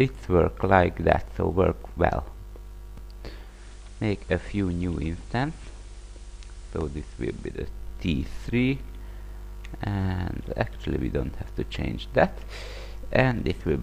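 At 3.40 s, digital radio blending to analogue FM: a 224 ms cross-fade brings faint hiss, about 3 dB quieter, restored at 7.67 s, unlike codec bandwidth loss.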